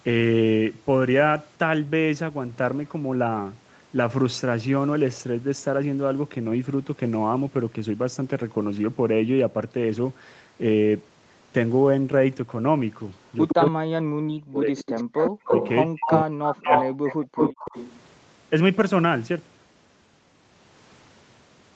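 From 13.27 to 13.71 s a second copy of the speech trails the original by 117 ms, about 5 dB below it. This is an echo leak: the far end is likely playing the call on a loudspeaker, and its echo canceller let part of that playback back into its microphone.

Overlapping this, from 13.53 to 14.83 s, the main talker dips and breaks into pieces, at worst roughly 40 dB down, for around a second in total. This is speech suppressed in double talk. With both sides talking at once, the canceller likely could not tell its own talker from the returning echo and turned everything down.

The echo leak returns from 14.79 to 15.69 s, now lagging by 221 ms and again about 5 dB under the speech.

From 15.11 to 15.16 s the room sound briefly drops out, about 30 dB down, for a 50 ms hole before it returns. This is background gated by the echo canceller, which clamped the microphone hard while the loudspeaker was active.

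From 15.45 to 17.01 s the talker is again suppressed in double talk in chopped fragments, roughly 40 dB at the deepest and about a second affected overall.

Finally, from 16.0 to 18.0 s the echo leak comes back at 221 ms delay, now about as loud as the speech itself, so the repeat competes directly with the original.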